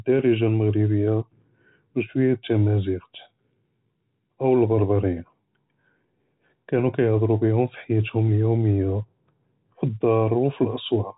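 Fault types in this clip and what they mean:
No faults in this clip.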